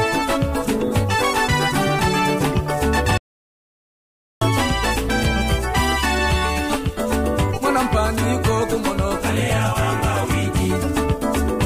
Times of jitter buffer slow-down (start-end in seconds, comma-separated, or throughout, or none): none